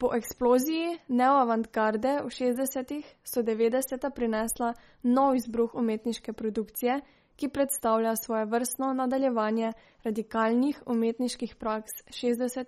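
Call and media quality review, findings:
Likely MP3 compression throughout the speech. Plainly audible watery, swirly texture; sibilants chirp. Consistent with a bitrate near 33 kbps. Spectrogram: hard ceiling at 15.9 kHz, weak bins flickering on and off frame to frame as bits are starved; smeared onsets on waveform.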